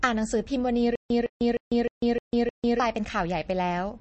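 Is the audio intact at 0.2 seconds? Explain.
No. At 0.2 seconds, as throughout the clip, the speech sounds watery and swirly, with a metallic chirp on s sounds, smeared onsets, and nothing above 8.3 kHz. The likely cause is MP3 compression at a starved bitrate, which fits roughly 32 kbps. Short of bits, the encoder cuts the treble at a fixed frequency and zeroes weak spectral lines, which then flicker on and off from frame to frame.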